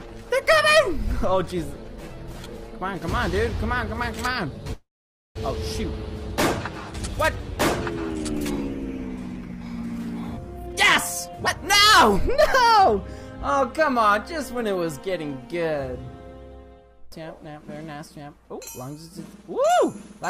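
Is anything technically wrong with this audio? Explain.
Yes, there are two faults.

From 4.73 to 5.37 s there is a call audio freeze, likely from delayed packets draining the jitter buffer. The last sound is stretched into a fading buzz or hiss, then about 0.5 s of silence, adding 620 ms of delay with nothing lost. On a spectrogram this looks like smeared, repeating bands decaying into a blank strip.

From 10.56 to 13.98 s a jitter buffer speed-up plays the audio at about 117% speed, with pitch unchanged, so it sounds clearly hurried. Pitch-period chunks totalling roughly 0.7 s are cut out. The waveform looks compressed in time, with harmonics holding their spacing.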